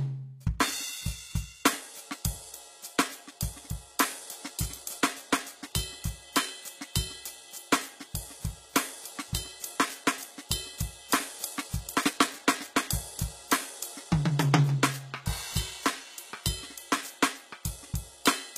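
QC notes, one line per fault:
throughout, HE-AAC compression: likely a low-bitrate HE-AAC encode, around 20 kbps, synthesising treble from copied lower bands, so highs turn gritty and metallic, with nothing above 14.9 kHz.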